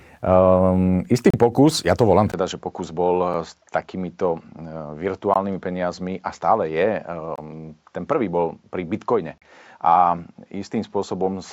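At 1.30 to 1.34 s the speech drops out for about 32 ms. This is a gap between stream segments. Two segments' time stamps do not meet, and the player fills the space with silence. The hole has hard edges. Nothing is lost from the sound itself. It falls at a segment boundary, and the segments here are 2.0 s long.

From 2.32 s to the end, the sound changes character. A short silence of about 20 ms marks the switch. Afterwards nothing remains above 7.6 kHz, so the voice turns duller. The level drops by roughly 5 dB. A new background noise appears, roughly 45 dB below the speech. The likely cause is the input switched to a poorer device, with a narrower band and its own noise.

The same gaps recur every 2.0 s. There is a brief one at 3.34 s, about 3 ms long. Another falls at 5.34 s and lasts about 18 ms. The next runs from 7.36 to 7.38 s, about 23 ms. The last runs from 9.38 to 9.42 s, about 36 ms. 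Each is a clean, hard-edged hole of silence.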